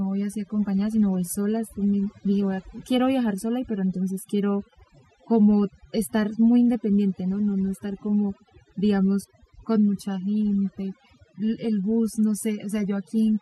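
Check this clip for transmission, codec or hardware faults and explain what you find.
One problem runs through the whole speech clip: overdone noise removal. The noise reduction was pushed too hard, so any frequency band sitting near its noise estimate gets pulled right down or switched off. The quieter parts of the voice are cut along with the noise. The background drops and breaks up into twinkly little specks.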